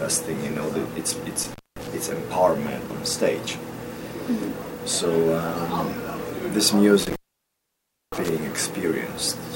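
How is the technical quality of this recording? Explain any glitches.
The recording has two dropouts from an intermittent contact, around 1.43–1.87 s and 6.99–8.29 s. A loose plug or cable briefly opens, so the sound cuts out for about 0.23 s and then 0.97 s, with crackle at each edge and faint hiss in between.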